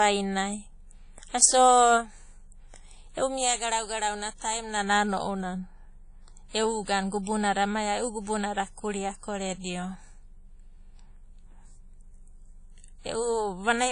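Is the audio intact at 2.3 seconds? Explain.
No. At 2.3 s, as throughout the clip, the speech carries ringing, washy smearing with signal-following hiss and nothing above 10.1 kHz, likely WMA compression at a low bitrate near 32 kbps.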